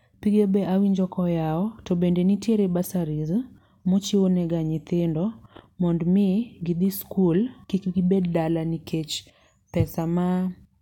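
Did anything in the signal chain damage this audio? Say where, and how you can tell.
No, no signal-chain damage heard.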